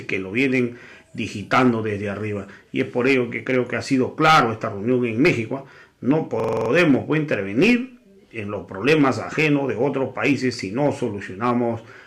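At 6.4 s a system hang loop begins: a 43 ms slice repeats seven times until 6.7 s, a stutter at about 23 Hz. This fits a 2048-sample buffer replaying.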